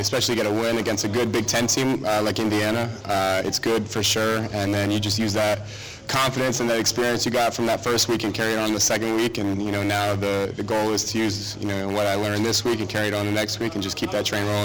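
Nothing in this recording stood out as a technical fault on listening.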